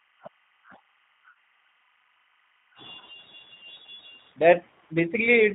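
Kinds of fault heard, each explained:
Timecode bleed: linear timecode leaking in from an adjacent track or cable, running at 25 frames per second as a square wave flipping between roughly 1 kHz and 2 kHz. It sits far down, around 40 dB below the speech, as a faint continuous chirping warble underneath.
G.729 codec: the speech passes through an 8 kbit/s G.729A VoIP codec, which resynthesises it from a vocal tract filter, a pitch predictor and sparse pulses. Nothing above 4 kHz survives, and the coding damage is plainly audible as a rough, somewhat synthetic, band-limited voice.
VoIP packet loss concealed by the speech codec: about 40 ms of audio went missing, which fits two lost packets. At roughly 1.31 s the decoder keeps extending the last pitch and filter state and lowers the gain, giving a short fading stretch where the speech should be.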